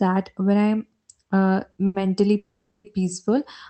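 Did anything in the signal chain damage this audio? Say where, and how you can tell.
Yes. Short stalls from late packets occur at 1.71 to 1.77 s and 1.86 to 1.97 s, just after "when I'm uh". This is a network and jitter-buffer problem: the buffer ran empty, so the last sound was held for 30 ms, then 80 ms, and resumed with nothing missing.

A call audio freeze runs from 2.38 to 2.87 s. The speech halts, a fading buzz-like continuation of the last sound fills the 460 ms gap and ends in 120 ms of silence, then the audio resumes exactly where it stopped. The likely cause is packets held up in transit, draining the jitter buffer.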